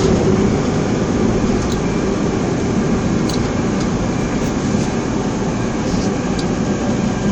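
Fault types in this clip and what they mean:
Damaged data in a compressed stream: a stretch of the encoded file got corrupted, so the decoder misread those frames, lost sync and hunted for the next valid header. You hear it as a brief blip at about 3.71 s.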